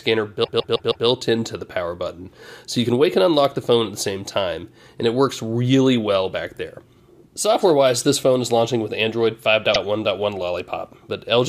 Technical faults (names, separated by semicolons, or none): repeated frames